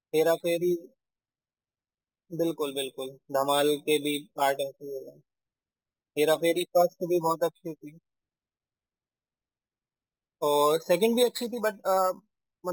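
From start to finish this speech carries imaging from sample-and-hold upsampling. Each sample was simply repeated to raise the rate, with no smoothing filter, and that fits a jump from 12 kHz to 48 kHz. Mirrored copies of the voice's spectrum leak in above the old 6 kHz ceiling, the lowest sitting between 6 and 12 kHz at about 18 dB below the speech. You hear it as a bright, metallic fizz that rises and falls with the talking.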